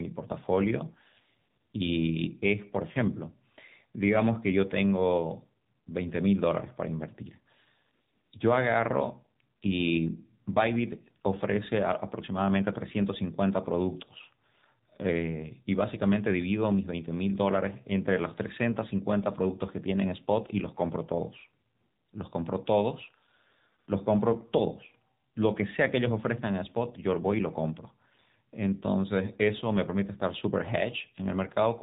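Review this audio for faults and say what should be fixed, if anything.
The whole clip has gone through the AMR narrowband mobile codec, so nothing above about 3.8 kHz survives. The speech sounds buzzy and plainly synthetic, because the codec rebuilds it from a vocal-tract model and sparse pulses, which fits a low mode around 7.4 kbps. To prevent it, capture or route the call over a wideband path instead of narrowband mobile.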